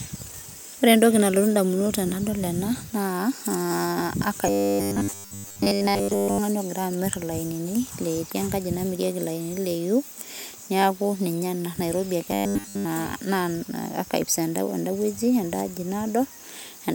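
From 4.47 to 6.38 s, and again from 12.31 to 12.85 s, the speech turns into robotic sound from repeated short buffers, likely from a 10 ms slice being looped while real audio is skipped. It gives a rigid 100 Hz buzz over most of the first stretch and all of the second, unlike a pitch shift, which would still track the speaker's intonation.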